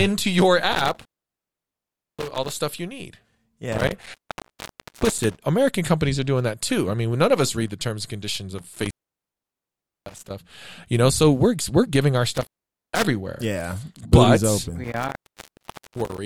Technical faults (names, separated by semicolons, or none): intermittent contact